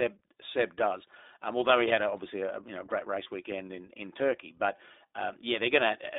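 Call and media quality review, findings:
iLBC codec, whole clip: speech band-limited to roughly 300 Hz–3.7 kHz, with a rough, slightly synthetic edge. Each 20 ms frame's excitation is coded on its own, and the plainly audible grit fits iLBC's 15.2 kbps mode.

Lost iLBC frames, 3.24–3.28 s, between "know great" and "weekend in in": a short buzzy held-vowel blip where the decoder repeated the last pitch cycle with noise. Fits one dropped 20 ms frame; voice recovers almost instantly since frames stand alone.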